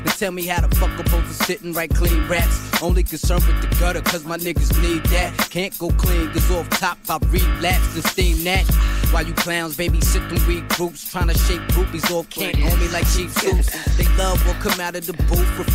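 No technical faults can be heard anywhere in this audio.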